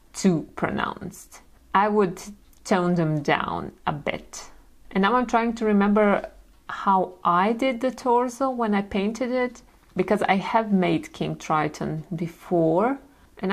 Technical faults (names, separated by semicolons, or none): none